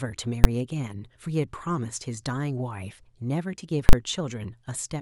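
At 0.44 s there's a loud bang in the speech: invalid numbers at full scale. Some calculation blew up into infinite or invalid values, which got slammed to the maximum sample value for a 10 ms block. That's too short to hear as anything but one hard crack. It happens again from 3.89 to 3.93 s, this time 40 ms pinned at the rail, so you get a pop going in, dead nothing where the speech should be, and another pop coming out.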